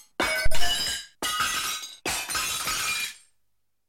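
At 0.46 s a phantom power thump lands: a deep, low-frequency thud lasting until about 0.74 s. Its energy falls away with a decay of roughly 63 ms, so the body of the thump is short and the remainder is a fading low tail. The cause is a DC step on a live input, from phantom or another supply being switched on or off, which passes through the input's coupling capacitors as a single pressure-like pulse.

At 1.23 s there is a brief blip from damaged data in a compressed stream. It is very short, under 20 ms. Part of the encoded data at that point was corrupted, so the decoder misread or discarded the affected frame, lost sync, and produced a momentary burst of wrong output before locking onto the next valid frame header.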